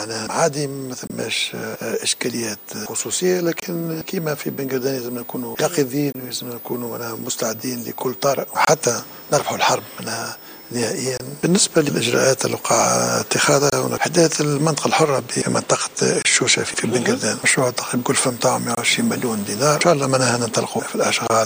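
Every 2.5 s from 1.07 to 21.27 s, a gap between chunks inserts 25 ms of silence; unlike a dropout, no sound is removed.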